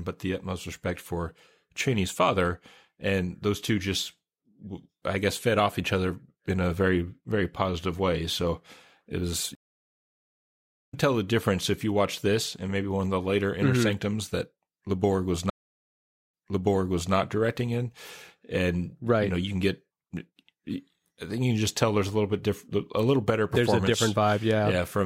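At 9.55 s, a stream reconnect dropped the connection and restarted decoding mid-stream: after "it was" the speech falls silent for 1.38 s, then resumes at "tell the difference if", roughly a second further on. At 15.50 s a second reconnect brings 0.82 s of silence, and the server resends a burst, so playback restarts 0.81 s earlier, repeating material before "directing in and right".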